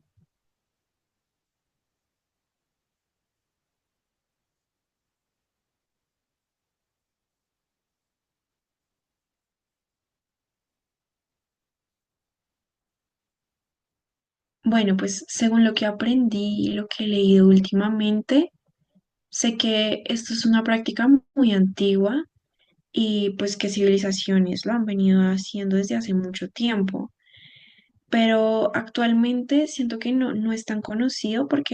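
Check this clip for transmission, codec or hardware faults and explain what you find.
Nothing in this speech recording points to any transmission, codec or hardware trouble, so there's nothing to flag here.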